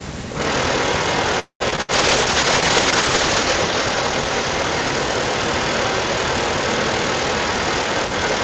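Speech over an Opus call, with nothing above 8 kHz, and right at the start, from 0.01 to 0.25 s, the talker gets clamped down by up to around 40 dB for roughly a fifth of a second. That's the sound of speech suppressed in double talk, likely the echo canceller ducking everything because it couldn't tell the near talker from the far end coming through the loudspeaker. From 0.29 s to the end there's an echo leak. A delayed copy of the voice trails about 215 ms behind, sitting roughly 10 dB under the direct speech, most likely residual loudspeaker pickup the canceller didn't fully remove and sent back down the line. Between 1.39 and 1.62 s there's a call audio freeze. The last sound gets stretched for about 208 ms, including about 90 ms of near silence, then carries on where it stopped with nothing lost, which is likely the jitter buffer running dry while packets were held up. Right after that, at 1.70 to 1.74 s and again at 1.76 to 1.79 s, you get two quick smears from short concealed packet loss, each patching a tiny hole with extrapolated sound. 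Then from 1.81 to 1.91 s a burst of packet loss holds the last sound and fades it before jumping ahead, with about 60 ms of actual audio gone. From 1.94 to 5.71 s a call bitrate drop makes things rough and watery. That coarseness fits the encoder falling from around 32 kbps to around 8 kbps, and it stays at its worst for about 1.45 s before it recovers.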